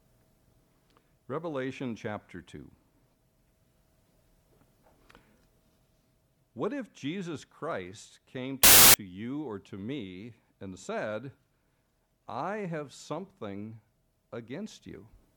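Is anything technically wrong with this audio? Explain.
Yes. From 8.64 to 8.94 s there's file tags played as audio: an embedded cover picture's compressed data is read as samples, giving a hard-edged burst of very loud white noise.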